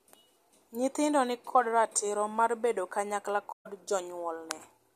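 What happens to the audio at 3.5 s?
Just after "ratiro mar bedo kanyakla", from 3.51 to 3.67 s, there is a corrupt frame concealed. The damaged stretch lasts about 0.15 s, which fits roughly six damaged AAC frames. Flipped bits spoiled those frames. The decoder caught the damage and covered the frames itself rather than playing garbage. It did so by muting them or with a sign-scrambled copy of the last good spectrum.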